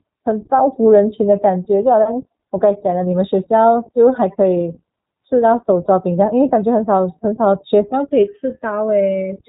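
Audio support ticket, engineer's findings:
Whole clip: iLBC codec damage, plainly audible. Band stops at 4 kHz, speech a bit rough and synthetic. Each short frame coded on its own. Fits 20 ms frames, roughly 15 kbps.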